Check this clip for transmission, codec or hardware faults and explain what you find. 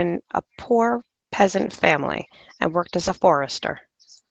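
One transmission fault is audible. From 2.99 to 3.17 s, a lost packet rebuilt from error correction: packets dropped, and the decoder played the low-bitrate copies carried in following packets, so about 100 ms of speech sounds rougher and noisier but has no gap.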